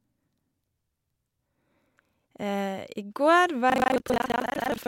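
A speech clip in which, from 3.68 s after "I går" to the end at 4.87 s, buffer tearing sets in: writer and hardware reader have slipped, so roughly half of each period replays audio from a lap earlier, about 150 ms old, giving a rattling 25 Hz robotic buzz.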